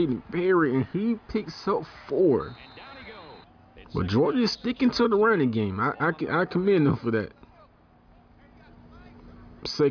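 Nothing is technically wrong with the clip, as no fault can be heard anywhere in it.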